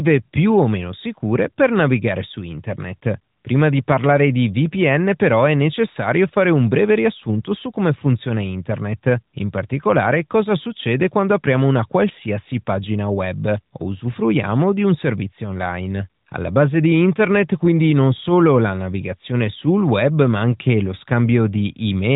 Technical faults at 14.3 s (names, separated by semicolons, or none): none